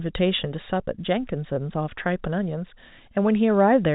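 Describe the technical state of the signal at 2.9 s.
At 2.9 s the speech is intact, with nothing faulty to report, and it carries only the narrow telephone band of G.711 coding, with nothing above 4 kHz and at most a faint level-following hiss.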